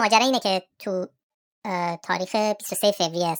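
The speech sounds high and hurried from start to finish, running at 1.5 times normal speed and pitched up about seven semitones. That is a wrong sample rate fault: the audio is played back faster than it was recorded, without conversion, which fits 32 kHz material played at 48 kHz.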